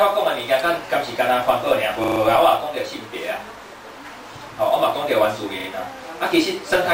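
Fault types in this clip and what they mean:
Repeated buffer: when fresh audio failed to arrive in time, the playback device replayed its last block, so one short slice sounds several times in a row with a hard seam at each repeat. Here the slice recurs every 40 ms, which points to a 40 ms buffer. There is a stutter at 2.04 s (four extra plays), a single repeat at 3.68 s, and two at 5.6 s. Unlike a dropout, there is no silent gap.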